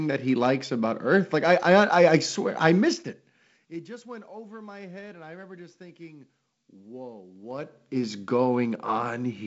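From 7.32 to 8.12 s, just after "remember just thinking whoa", zipper noise: the level moves by around 20 dB in unsmoothed 2 dB steps, about fifteen a second. Each jump puts a small click into the waveform, giving a rapid ticking over the speech.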